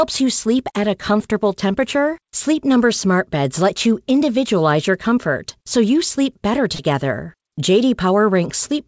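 Short concealed packet loss at 6.75 to 6.80 s: roughly 40 ms of this speech never reached the decoder in time, and the receiver bridged about 37 ms of the gap by extending the preceding sound, following its pitch where it was voiced and using shaped noise where it was not, before fading back into real audio. It is heard as a brief smear or wobble. The call path's band ends at 8 kHz, which fits G.722.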